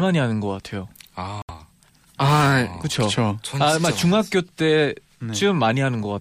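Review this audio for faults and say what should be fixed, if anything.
Bluetooth dropout at 1.42 to 1.50 s: the speech drops to silence for about 80 ms, then resumes further along as though it had kept playing underneath. Audio packets likely missed their deadline to the headphones and were discarded, which fits roughly three lost frames, about 70 ms of sound. To prevent it, keep the headphones close to the source with a clear path and fewer competing 2.4 GHz devices nearby.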